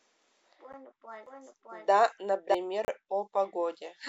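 At 0.73 s a block of digital silence, about 11 ms, which fits a 512-sample buffer not filled in time, gives a tick rather than a fade. A longer 32 ms hole at 2.85–2.88 s sounds like a brief gap. From 1.26 to 2.54 s a doubled audio track, roughly as loud and around 0.7 s behind, is likely a second capture path. It sounds like a dry repeat with abrupt start and stop, unlike an echo, which decays and carries room colour.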